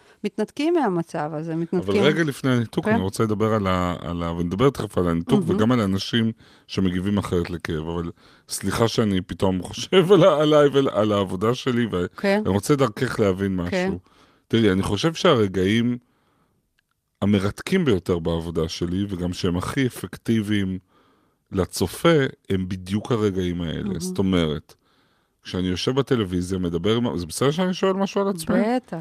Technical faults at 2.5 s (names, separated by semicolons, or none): none